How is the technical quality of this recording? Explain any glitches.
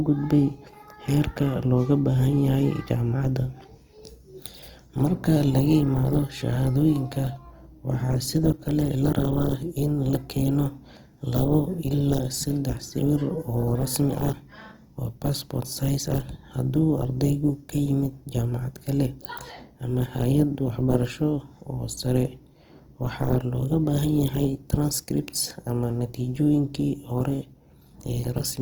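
The recording has one audible problem: compression damage across the whole speech clip. Throughout, upper harmonics sound grainy and noise-like. The likely cause is Opus compression in its music (CELT) mode at a rate that fits about 24 kbps, where starved bands are filled with folded or noise content. A spectrogram shows full bandwidth up to 20.2 kHz with few gaps but a speckled, noisy texture replacing clean harmonic lines.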